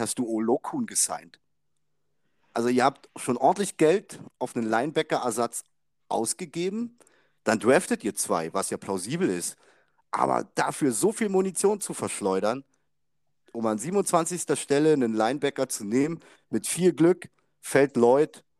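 Nothing in the speech recording suggests a technical fault at any point in the signal.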